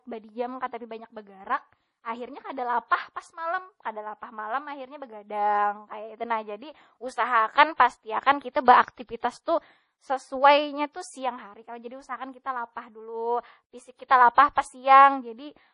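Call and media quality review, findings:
Likely MP3 compression throughout, speech, whole clip. Encoder starved of bits, consistent with a low bitrate around 32 kbps. Treble cut hard at 10.6 kHz, nothing above. Weak frequency lines dropped and restored frame to frame: heavy watery, swirling texture, metallic chirp on s sounds, smeared consonant onsets.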